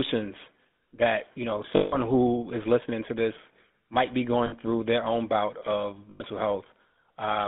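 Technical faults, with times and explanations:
Throughout, GSM full-rate codec: the speech is confined to roughly 200 Hz to 3.5 kHz and carries a plainly audible buzzy, gravelly grain. The sparse pulse excitation produces this roughness, so it sounds coarser than simple telephone band-limiting, and the sound fits 13 kbps full-rate coding.
1.76–1.97 s, 4.46–4.53 s and 6.10–6.23 s, lost GSM frames: gaps of 160, 60 and 100 ms are filled by repeating the last good frame. The result is a brief rough, metallic ring, not a hard cut to silence as in an ordinary dropout.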